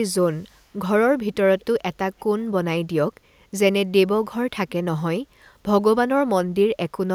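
At 1.6 s and again at 2.19 s, brief scraps of echo leak appear. A very faint copy of the speech returns 243 ms late, each scrap lasting about 40 to 50 ms. This is likely a far-end echo canceller letting loudspeaker pickup slip back.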